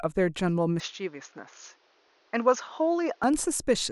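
At 0.8 s the speech abruptly turns duller and boxy, with no gap at the change. Nothing above 6.8 kHz remains, so the crisp top end is missing. The level falls by roughly 5 dB. A faint new background noise appears, far below the speech. At 3.24 s the fuller, brighter sound returns. The likely cause is an input switched to a poorer device, a narrower-band microphone path with its own tone and noise.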